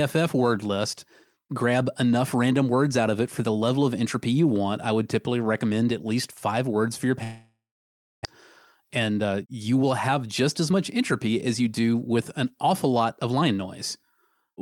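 At 7.23 s, just after "five words for your", the speech breaks off until 8.27 s. The receiver stretches the last sound into a fading buzz or hiss, then about 0.61 s of silence, which points to a likely long network dropout. About 0.6 s of speech never returns.

From 8.80 s to 13.58 s a jitter buffer speed-up follows. The backlog built up after the gap is drained by cutting out short pitch-period pieces, roughly 0.4 s in all. Speech runs at 108% speed at unchanged pitch and sounds hurried.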